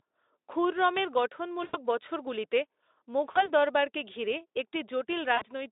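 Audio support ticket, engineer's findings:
VoIP packet loss concealed by the speech codec at 1.63–1.77 s, 3.31–3.50 s, 5.36–5.45 s. Roughly 100, 40 and 60 ms of audio missing. Decoder extrapolates last pitch and filter, fading into a buzzy tone or coloured noise. Weakness persists briefly after packets resume. Codec path sounds like narrowband Speex.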